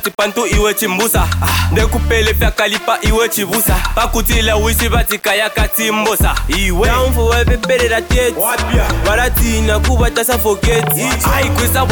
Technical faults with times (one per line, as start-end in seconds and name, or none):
0.00-11.92 low bit depth without dither